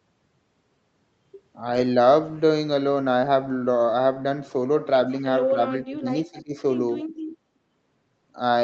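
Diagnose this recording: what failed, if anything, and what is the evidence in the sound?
In the call processing stage, the echo canceller likely mistook double talk for echo and turned down the near-end talker along with it. Speech suppressed in double talk shows as dips from 5.51 to 6.09 s, roughly 15 dB at worst, and from 6.25 to 6.54 s, about 20 dB.

An echo leak likely occurred when loudspeaker sound slipped past the echo canceller and was sent back. From 6.38 to 6.42 s, a brief, faint copy of the speech, delayed by 252 ms and about 25 dB below it, surfaces inside the second dip.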